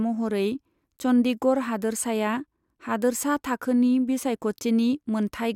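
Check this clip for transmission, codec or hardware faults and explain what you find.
No faults detected.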